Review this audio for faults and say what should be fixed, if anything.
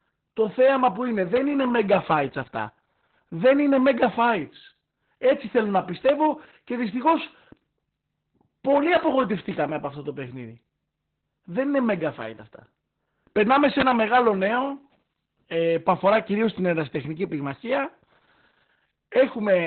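Opus voice compression was starved of bits and ran SILK-style narrowband coding, likely around 8 kbps. The whole speech track sounds muffled, hoarse and robotic, with nothing above about 4.3 kHz. To prevent it, raise the Opus bitrate enough to keep wideband coding.

An electrical switching spike, likely from nearby switching or static arcing onto the audio line, adds sharp snaps at 1.36 s, 6.09 s and 13.80–13.82 s. To prevent it, shield and ground the cabling and keep it away from switches and motors.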